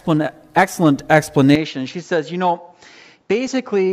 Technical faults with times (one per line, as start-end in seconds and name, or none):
0.56 compressed frames skipped
1.55-3.93 input switched to a poorer device